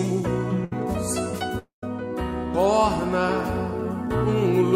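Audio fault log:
0.64–0.72 s, burst of packet loss. The last sound is held and fades for about 70 ms. Audio then resumes with roughly 70 ms skipped.
1.58–1.83 s, long network dropout. The sound is held and fades across 0.24 s, leaving 0.12 s of silence. About 0.24 s is missing, likely from a network outage.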